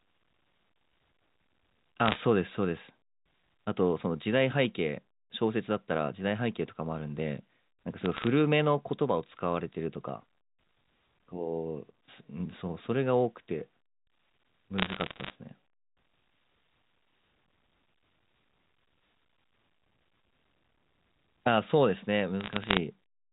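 Bit errors on a digital phone line crackle through four bursts, at 2.06 to 2.19, 8.04 to 8.28, 14.78 to 15.30 and 22.40 to 22.77 s. Flipped bits, around 0.3 to 0.7 percent, corrupt single samples into sharp ticks over the band-limited G.711 speech. They show as isolated waveform spikes and thin full-height vertical lines on a spectrogram.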